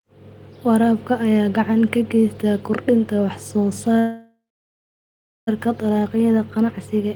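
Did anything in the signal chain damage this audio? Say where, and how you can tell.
Yes: a call audio freeze from 3.99 to 5.49 s, likely a network jitter-buffer underrun. Speech stalls into fading fill, then about 1.1 s of silence, and resumes where it stopped, with nothing lost.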